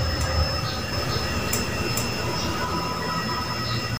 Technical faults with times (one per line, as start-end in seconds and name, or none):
0.93-2.65 doubled audio track